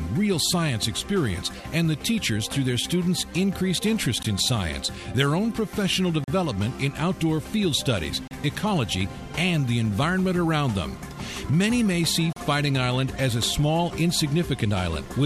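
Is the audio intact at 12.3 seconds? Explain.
No. A gap between stream segments opens at 12.33 s and lasts until 12.36 s, about 36 ms. The timestamps of two consecutive segments, which fit a 2-second segment length, leave a small hole in the timeline. The player fills that hole with silence, so the sound stops abruptly and resumes just as abruptly, with hard edges on both sides. Nothing is actually missing: the silence is inserted, not lost audio.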